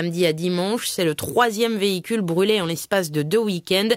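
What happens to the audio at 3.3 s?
Nothing goes wrong at 3.3 s; the audio carries on intact through that moment.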